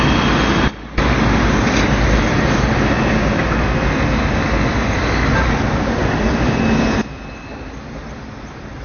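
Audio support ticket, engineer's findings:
Band-limited, dull texture across the whole clip. Nothing above 6.5 kHz; smeared transients, warbling and fizzy grain on sustained content. Likely AAC compression in the encode chain; damage fits a low bitrate around 24 kbps.

Sudden gain jump, 0.68 to 0.98 s. Level drops about 17 dB in one step, background noise with it, then returns at 0.98 s. Probably an unramped digital gain change in the level stage.

Sudden gain jump, 7.01 s to end. Same step behaviour, about 13 dB down, no recovery before the clip ends. Sound and noise floor fall together, pointing at an unramped digital gain change.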